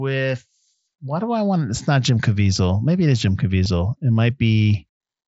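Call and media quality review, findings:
Brief repeated-waveform patch at 3.64 s, about 15 ms long. Concealed Bluetooth headset packet loss: the receiver filled a gap, fitting two lost packets, with recent audio on the mSBC link.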